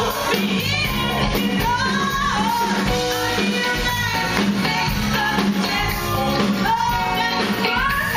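No technical fault can be heard anywhere in the audio, and the signal holds steady throughout.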